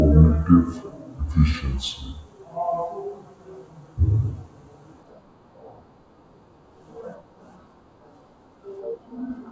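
From start to finish the speech plays at a wrong sample rate: it runs at about two-thirds of its proper speed and sits about 7 semitones low, which fits material recorded at 24 kHz being played back at 16 kHz with no conversion. The telltale sign is that tempo and pitch drop together by the same ratio, and the formants sink with them, unlike time-stretching or pitch-shifting, where one changes while the other holds.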